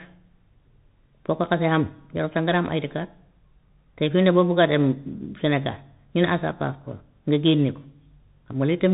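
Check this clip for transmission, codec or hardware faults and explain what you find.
One fault runs through the whole clip: the speech passes through a Bluetooth CVSD headset codec. Nothing survives above about 3.8 kHz. Each sample is coded as a single up-or-down step, which fits a 64 kbps link. Loud high sounds outrun that step and distort. S sounds turn scratchy, and a granular hiss sits under the speech.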